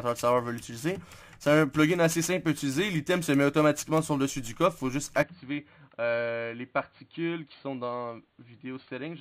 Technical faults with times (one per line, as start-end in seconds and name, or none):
5.23-9.20 input switched to a poorer device